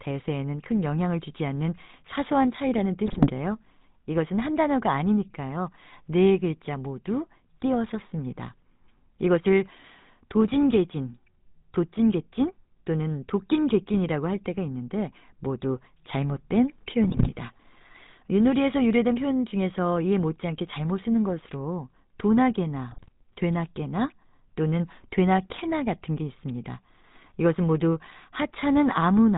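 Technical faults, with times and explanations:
Throughout: GSM full-rate codec. The speech has that plainly audible buzzy, gravelly roughness, and nothing comes through above 4 kHz. The codec rebuilds the voice from a vocal-tract model fed by regularly spaced pulses, keeping only every third excitation sample, which fits a 13 kbps full-rate stream.
3.06–3.31 s, 17.04–17.29 s, 22.90–23.09 s: GSM bit errors. Each burst turns the speech into squawks, pops and gargling for roughly a quarter second or a bit less. Corrupted filter, pitch or gain values reach the decoder frame after frame, bending the spectrum or throwing the level around while the bad patch lasts.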